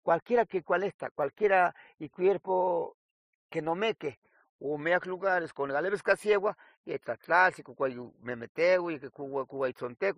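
Throughout the speech, the audio was likely passed through two lossy codecs in a row: the artefacts point to a low-rate MP3-style encode of roughly 33 kbit/s, followed by an AAC encode of roughly 64 kbit/s. That is transcoding between lossy codecs. The second encoder spent its bits preserving the first encoder's damage and added its own, so both sets of artefacts are heard together, and nothing remains above 15.2 kHz.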